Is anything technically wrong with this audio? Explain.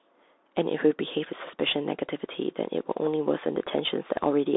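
Yes, the whole clip has gone through a Bluetooth CVSD headset codec. The speech sits in a narrow phone-style band from roughly 300 Hz to 3.7 kHz, with nothing above 3.8 kHz. CVSD sends just one bit per sample saying up or down and adapts its step size, which fits a 64 kbps link. Loud, fast-moving high content outruns the step, so s sounds come out scratchy and a grainy hiss sits under the speech.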